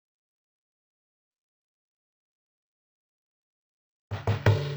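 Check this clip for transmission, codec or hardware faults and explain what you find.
There's one fault, and it runs the whole length of the music: stereo read as mono. The left and right samples got played back to back as one channel, so everything drags at half speed, a full octave low, with a faint mirrored ghost up in the top half of the spectrum.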